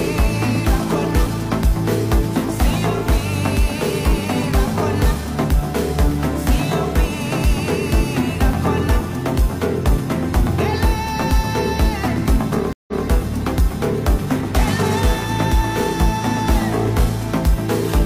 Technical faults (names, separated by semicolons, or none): stream reconnect